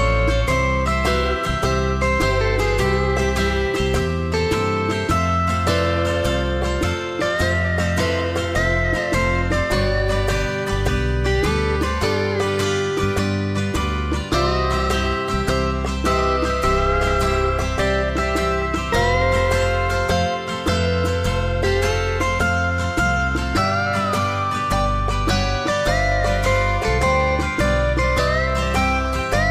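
No technical faults are audible.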